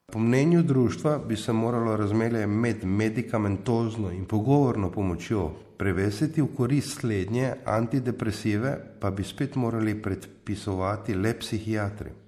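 Throughout the speech there's plainly audible, watery swirl, likely MP3 compression squeezed to something around 64 kbps, zeroing weak frequency lines frame to frame.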